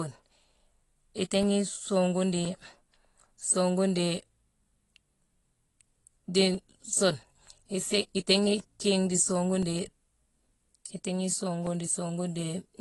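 From the start the speech carries plainly audible AAC compression damage, likely from AAC-LC at a low rate, which fits roughly 32 kbps. There's nothing above 11.5 kHz, so it sounds dull and smeared, with the coder starving bands it judges you won't miss.

Then from 0.41 s to 12.68 s there are periodic USB or driver dropouts, spaced exactly 1.024 s apart, about fifteen in all. Each time something blocks the bus or driver, a couple of milliseconds are replaced by silence, and you hear a regular tick.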